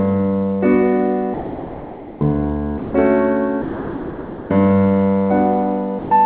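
Sound dropped by the voice detector at 1.34–2.21 s, 2.78–2.93 s, 3.62–4.49 s and 5.99–6.11 s: the music gives way to steady, featureless noise and then resumes. The likely cause is the sender's voice detector treating the music as background, halting transmission so the receiver fills the gaps with comfort noise. The whole clip is band-limited, with nothing above 4 kHz, which fits a narrowband call codec.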